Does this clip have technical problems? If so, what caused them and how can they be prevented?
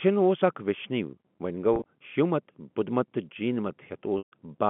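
Yes, there's packet loss with pitch repetition twice. Around 1.74 to 1.84 s, between "اکھ ویشنوی ووٚنہِ" and "شیو مت بدھ مت", short gaps totalling 70 ms (longest 30 ms) get patched by repeating the last pitch cycle, giving a brief buzzy hold. At 4.18 to 4.32 s, a solid 140 ms dropout outlasts the repeat, fades to silence, then cross-fades back. A bigger jitter buffer or forward error correction on the network link would prevent it.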